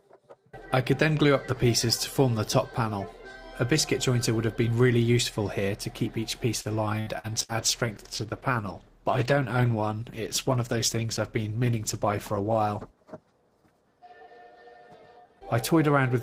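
From 6.61 to 7.52 s the sound turns choppy and robotic, with gaps up to 60 ms filled by extending the last sound. This is repeated packet loss.

From 7.37 to 14.23 s it grows rough, watery and muffled. That fits a call bitrate drop from about 32 to 13 kbps, which forces coarser coding and cuts high frequencies.

Between 11.75 and 12.48 s the sound runs about 4% fast at unchanged pitch. This is a jitter buffer speed-up trimming a few tens of milliseconds of pitch periods.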